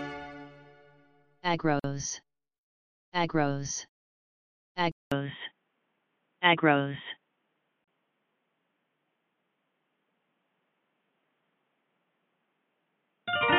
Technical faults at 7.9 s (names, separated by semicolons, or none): input switched to a poorer device; gap at a join of encoded pieces